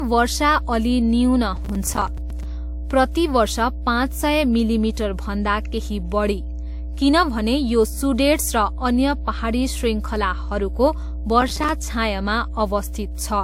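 A steady 60 Hz mains hum runs through the whole clip, sitting roughly 10 dB below the speech. Power-line current is leaking into the signal, most likely through a ground loop or a nearby transformer. It is heard as a constant low drone under everything.

The audio also has nothing above 16.6 kHz, and artefacts of more than one character are heard together. This is likely transcoding between lossy codecs, perhaps WMA followed by Vorbis at a low rate near 55 kbit/s. Each pass kept the previous damage and added its own.

From 1.57 to 2.43 s, processor overload crackle tears through the speech. The processor kept missing its audio deadlines, and each miss left a short silent gap. The gaps fit buffers of about 5 ms, roughly twenty of them. Together they sound like gritty crackle.

The same processor overload crackle returns from 11.41 to 11.69 s. This burst is shorter, with around ten dropped buffers, each again leaving a brief silence. 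The result is a quick rasp of tearing that stops as the load eases.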